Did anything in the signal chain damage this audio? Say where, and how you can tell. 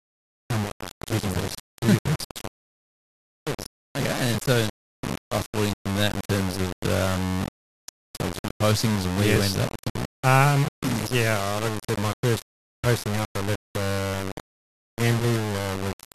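Yes. The speech carries a coarse, grainy distortion from start to finish that tracks the level of the sound. Quiet passages turn rough and the softest parts break up or sputter between a couple of steps. The error sits only about ten dB below the signal, which fits a 4-bit word length with plain rounding. The likely cause is low bit depth without dither, introduced at a sample-format conversion stage where the samples were requantised without any added noise to decorrelate the error.

At 9.36 s there is a brief click-like stutter where about 6.5 ms of audio plays twice. That is the signature of overlapping chunks: a new block begins before the previous one has finished, so the join repeats a short slice. This points to the driver or buffer stage, and the spacing of the processing fits 2.5 s chunks.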